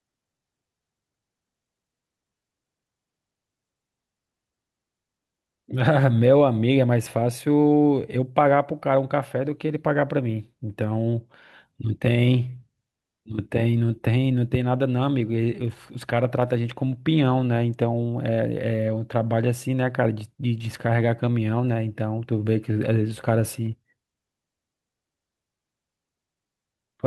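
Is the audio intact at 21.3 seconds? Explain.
Yes, the speech plays through 21.3 seconds cleanly, with no dropout, glitch or other fault at that moment.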